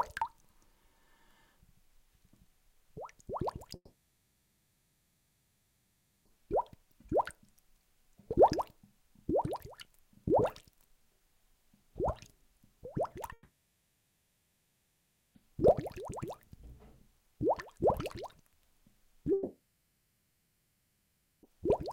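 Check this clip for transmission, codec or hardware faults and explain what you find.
Three gaps break up the audio, all of the same kind.

Long network dropout, at 3.75 to 6.30 s, 13.33 to 15.37 s and 19.33 to 21.45 s. The audio stopped arriving, most likely because of a network interruption, so roughly 2.5 s, 2.0 s and 2.1 s of sound were lost. The receiver stretches the last sound into a fading buzz or hiss, which then gives way to silence lasting about 0.25 s, 1.16 s and 1.24 s respectively. The sound resumes further on, and the missing part never returns.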